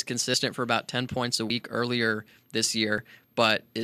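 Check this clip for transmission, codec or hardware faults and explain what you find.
There are three abrupt skips in this speech, at 0.34 s, 1.5 s and 2.98 s, each heard as a jump where the sound skips forward. That's most likely a dropped buffer (overrun): the recording side didn't pick up its samples in time, the hardware wrote over them, and the audio on either side got spliced together with no gap. The first jump loses around 40 ms, and the later two about 70 ms each.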